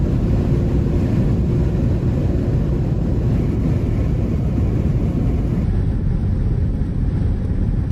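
A section at the wrong speed runs from 5.64 s to the end of the audio: from that point everything plays at 0.765 times its proper rate, so it drags and sits roughly five semitones lower, with pitch and tempo falling together at the boundary. Because speed and pitch shift as one, this is likely a playback or editing step that resampled the final stretch against the wrong clock rather than a deliberate pitch effect.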